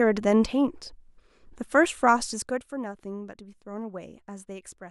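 From 2.24 to 2.78 s the speech drops around 15 dB in unsmoothed 1 dB steps, roughly fifty per second, causing zipper noise, a fine ticking over the fade. The waveform envelope falls as a staircase, and a spectrogram shows faint vertical click lines at each step.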